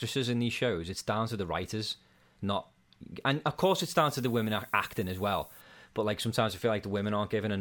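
From 3.63 to 5.61 s, between "writers not and of" and "but like sometimes i", the speech drops to low bit depth with noise shaping: samples are rounded to just 8 bits, and the rounding error is fed back so that it piles up at high frequencies instead of spreading evenly. The result is a steady, thin hiss roughly 20 dB below the speech, strongest toward the top of the band, laid over everything said in that stretch.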